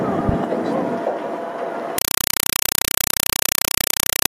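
At 1.98 s the sound gives way to loud, harsh, chattering static that runs to the end at 4.31 s. The static comes in short bursts of about 4 ms each, repeating 31.25 times a second, with silence between them. This is a compressed stream played as audio. A Dolby Digital (AC-3) bitstream, likely around 192 kbps, was passed through as if it were ordinary samples and never decoded, so each data frame plays as a burst of noise followed by zero padding.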